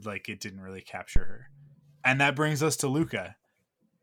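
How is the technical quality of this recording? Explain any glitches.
There's one real glitch in this speech clip. Right after "like it didn't really", from 1.16 to 1.43 s, a phantom power thump lands: a deep thud peaking around -10 dBFS that dies away in about 61 ms, from a supply switching on a live input and pushing its step through the coupling capacitors.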